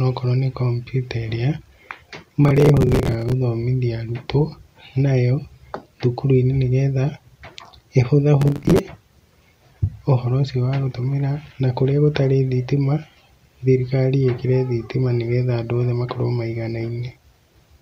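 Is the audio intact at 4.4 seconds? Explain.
Yes, at 4.4 s the audio is intact, with no fault to be heard at that moment.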